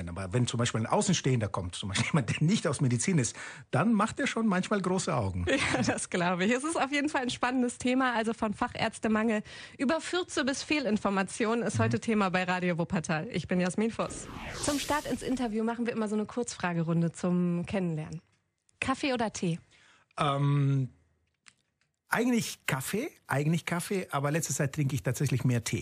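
There are no technical faults to describe at any point in this audio.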